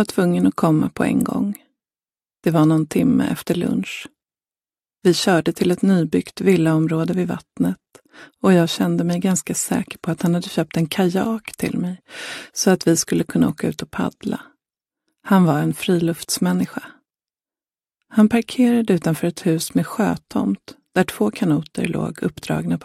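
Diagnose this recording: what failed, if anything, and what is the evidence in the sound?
Codec stage: compressed frames skipped at 14.40 s. Roughly 20 ms of audio vanishes as the playback jumps ahead, not the silent gap of a buffer dropout.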